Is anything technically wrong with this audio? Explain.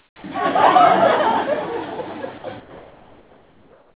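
Yes, two kinds of fault, heard through a band that stops at 4 kHz, which fits a narrowband telephone codec.

Comfort noise in place of the background, 0.00–0.24 s and 2.6–4.0 s: the sender likely stopped transmitting during quiet stretches, so the receiver substituted steady, featureless noise, about 6 dB and 4 dB quieter than the real background.

Sound dropped by the voice detector, 2.38–2.44 s: the detector likely mistook faint sound for background, so about 40 ms of it vanishes into 60 ms of flat noise.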